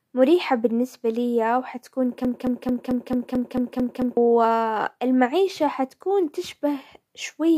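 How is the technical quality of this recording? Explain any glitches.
The recording has one clear fault, a broken-record loop, from 2.25 s to 4.17 s. A 0.22 s fragment of speech repeats nine times back to back, giving a rapid, mechanical stutter that replaces whatever should have been heard there. The likely cause is a stalled player, encoder or stream that kept re-sending its last held chunk. On a waveform, identical blocks tile the span, and a spectrogram shows the same pattern stamped at a regular 0.22 s period.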